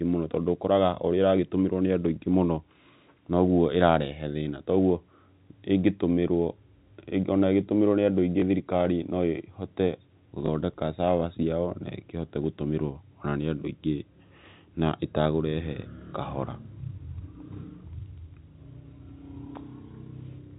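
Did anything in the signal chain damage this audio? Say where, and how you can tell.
Yes, at the network stage: packet loss with the last packet repeated, twice, at 8.40 s and 10.46 s, each time a single 20 ms packet. The receiver covered each gap by replaying the previous packet. That copy is unlikely to line up with the pitch cycle of the speech, and each one comes through as a small blip. The G.711 telephone coding carrying the audio holds everything below 4 kHz.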